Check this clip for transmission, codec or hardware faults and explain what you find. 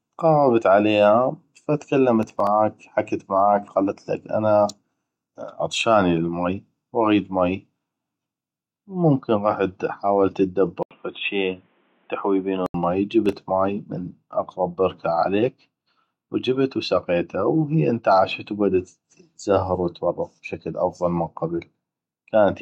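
Two kinds of fault turn up in this speech clip: processor overload crackle, twice, and one stretch that sounds like the input switched to a poorer device.

Processor overload crackle, 2.23 to 2.47 s (just before "حكت معاك") and 13.26 to 13.42 s (just before "مي من اقغب بركه"): gritty, tearing clicks from a rapid run of tiny hard-edged silences. Several short buffers, each around 3 ms, missed their deadlines in a row.

Input switched to a poorer device, 10.83 to 12.74 s, right after "ممكن غحت حاولت": an 80 ms dropout, then dull, boxy sound with nothing above 3.8 kHz and faint new background noise, at a similar level. This is likely a change to a narrower-band microphone or headset profile.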